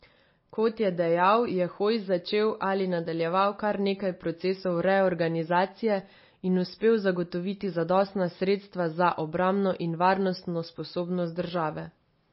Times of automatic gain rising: none

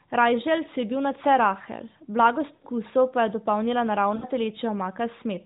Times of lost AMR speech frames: 2.54-2.66, 4.16-4.25

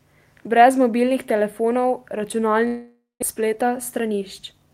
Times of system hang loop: none

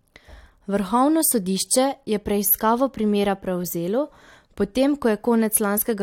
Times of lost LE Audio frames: none

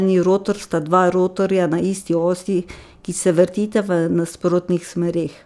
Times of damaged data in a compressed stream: none

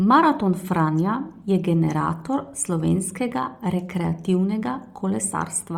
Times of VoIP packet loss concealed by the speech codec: none

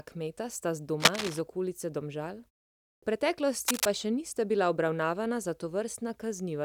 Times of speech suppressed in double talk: none

